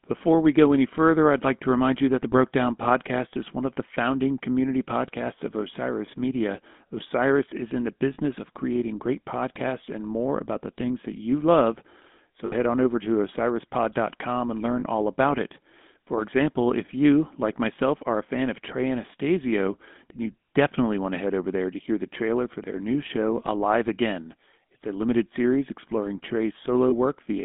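GSM full-rate codec damage runs through the whole speech clip. The sound is confined to roughly 200 Hz to 3.5 kHz, with a plainly audible buzzy, gravelly roughness. This comes from pulse-driven vocal-tract modelling with sparse excitation, and it fits a 13 kbps GSM channel. Lost GSM frames at 6.06–6.09, 8.14–8.19, 12.46–12.53, 14.80–14.83 and 26.90–26.93 s leave gaps of 20, 40, 60, 20 and 20 ms. The decoder covers each gap by repeating the last good frame's settings, which produces a brief rough, metallic ring.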